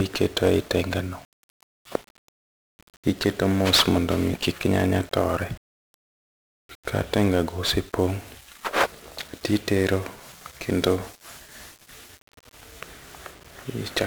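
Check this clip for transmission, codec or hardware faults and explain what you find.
The speech carries one codec fault, present from start to finish: 1-bit DFPWM compression. Every syllable sits inside a dense, fuzzy crackle, and the upper frequencies are dulled or replaced by hiss, and the damage is heavy throughout. The cause is a codec that keeps a single bit per sample, each bit only nudging an adaptive level up or down. Its coarse quantisation spreads broadband noise across the band, a texture which fits a rate around 48 kbps.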